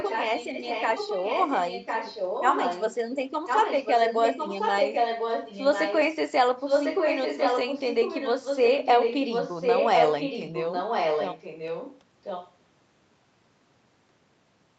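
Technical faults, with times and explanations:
0–2.95 s, 3.46–5.99 s, 6.6–12.01 s and 12.23–12.53 s: echo leak. The speech repeats 1.05 s later, loudest at 6.6–12.01 s and faintest at the end, likely from an incomplete echo canceller.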